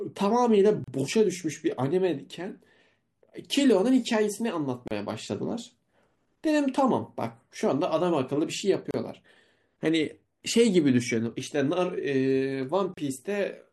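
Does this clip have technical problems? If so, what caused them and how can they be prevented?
Yes. A gap at a join of encoded pieces breaks the speech at 0.84, 4.88, 8.91 and 12.94 s, each 32 to 34 ms, every 4 s. Separately encoded pieces were joined without trimming, so encoder start delay and last-frame padding remain as silence. A spectrogram shows thin blank vertical stripes, and the waveform shows flat runs with abrupt, slightly smeared edges. Trim each piece's delay and padding before joining, or encode the audio as one continuous stream.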